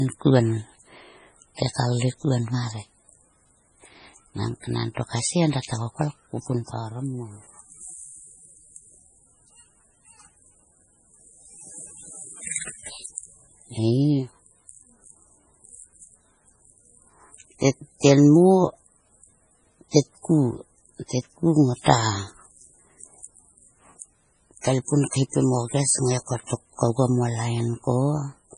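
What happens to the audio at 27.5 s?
At 27.5 s the speech carries the same MP3 compression heard across the whole clip. It is likely a starved, roughly 24 kbps encode that zeroes weak frequency lines frame by frame. Unlike a plain low-pass filter, the cutoff at 10.5 kHz comes with a watery, swirling texture and metallic chirps on s sounds.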